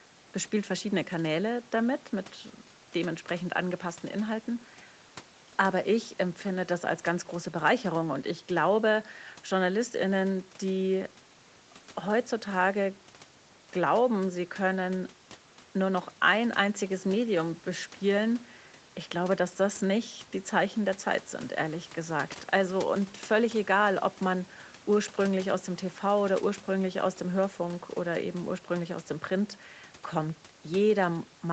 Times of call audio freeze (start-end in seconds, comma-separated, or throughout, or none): none